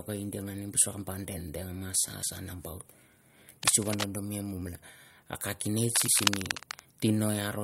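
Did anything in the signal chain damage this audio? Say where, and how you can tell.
Yes. Damaged data in a compressed stream shows up at the codec or storage stage at 2.20 to 2.25 s and again at 6.04 to 6.09 s. Each is a brief blip about 50 ms long. Corrupted bytes in the compressed file made the decoder misread those frames, lose sync and skip forward to the next valid frame header.

Cable scratch noise appears from 3.63 to 4.06 s at about 5 dB below the speech, and from 5.90 to 6.80 s at roughly the same level as the speech. It is heard as dense, uneven scratching and rustling laid over the speech, and the second burst overlaps the later decoder blip. The likely cause is a worn cable, connector or control in the analogue wiring being moved, so that rapid swings in contact resistance inject irregular noise bursts into the signal.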